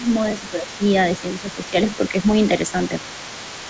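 Throughout the whole clip, a faint second voice sits about 20 dB under the speech, likely the other side's voice leaking through an imperfect echo canceller, showing as weak, interleaved harmonics on the spectrogram. The speech then briefly sags at 0.51–0.68, 1.18–1.24, 1.42–1.76, 1.97–2.15 and 2.68–2.74 s, by a few dB and around 10 dB at 1.42–1.76 s. These dips are likely speech suppressed in double talk, and they appear as short notches in the waveform envelope. Above all of this, the spectrum stops cleanly at 8 kHz, as the G.722 call path would produce.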